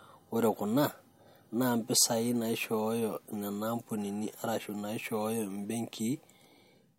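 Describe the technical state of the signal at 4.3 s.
At 4.3 s the signal is intact, with no dropout, distortion, clipping or other fault audible at that point.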